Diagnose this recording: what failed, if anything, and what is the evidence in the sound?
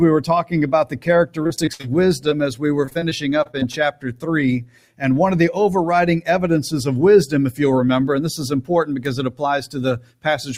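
The failure is in call processing: a speech-oriented noise suppressor stayed active on non-speech material. Across the whole recording the level swings by around 10 dB as the suppressor misjudges steady and decaying content as background noise and pulls it down, while transients pass largely intact. The result is an audible pumping and thinning, with sustained components and tails repeatedly ducked rather than held at a stable level.

The clearest individual instances of sound cut by the noise suppressor fall at 0.85–1.08 s, 3.92–4.27 s, 4.61–5.03 s and 9.99–10.26 s. Each time, the suppressor's gain drops by about 10 dB, so sustained portions sink and their decay is truncated instead of fading naturally. The stretches near 4 s and 4.6 s are the longest, roughly 0.4 s each, and sound like the material briefly retreating behind a gate.

The network stage shows repeated packet loss, giving a robotic sound in two bursts. 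From 1.43 to 1.85 s the holes are longer, up to 63 ms, and concealment covers about 38 percent of that span, producing choppy continuation with pieces missing. From 2.85 to 3.75 s the gaps are shorter, at most 24 ms, and about 20 percent is patched, giving choppy sound as the decoder repeatedly extends the last sound.

There is one short concealed packet loss at 2.29–2.33 s, also a network-stage fault. About 20 ms of audio failed to arrive in time, and the receiver bridged the hole by extending the preceding signal before crossfading back into the real audio. It is heard as a brief smear or wobble rather than a clean dropout, and isolated from the longer burst that follows at 2.85 s.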